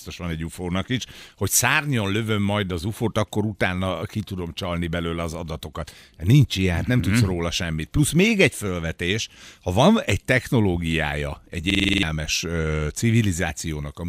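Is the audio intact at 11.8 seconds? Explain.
No. From 11.70 to 12.03 s a 46 ms scrap of speech repeats seven times as a 21.5 Hz machine-gun stutter. This is a system hang loop: the system froze while the hardware kept replaying one ring buffer, consistent with 2048 samples, and about 0.3 s of audio was lost.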